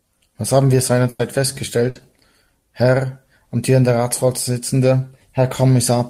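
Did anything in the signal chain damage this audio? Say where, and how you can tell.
Yes, at the network stage: two bursts of packet loss. Just after "haben wir", from 1.09 to 1.21 s, about 100 ms is concealed. Another 60 ms goes at 1.89 to 1.97 s. The receiver held and faded the last sound, then skipped the missing stretch.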